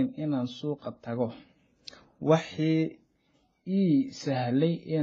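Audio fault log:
throughout, transcoding between lossy codecs: nothing above 8.2 kHz and stacked artefacts from successive encodes, likely a low-bitrate AAC-LC, then HE-AAC, then WMA 1 chain.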